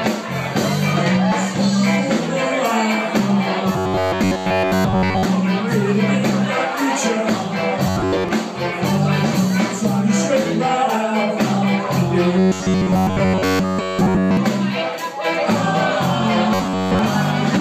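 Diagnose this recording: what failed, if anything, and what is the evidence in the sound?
The failure sits at the driver or buffer stage. Robotic sound from repeated short buffers appears at 3.73 to 5.25 s, 7.87 to 8.29 s, 12.39 to 14.37 s and 16.54 to 16.99 s. In each stretch the sound takes on a rigid, metallic buzz near 94 Hz. The cause is likely starved playback: fresh audio arrived too slowly, so a block of about 11 ms was looped in place of most of the real audio.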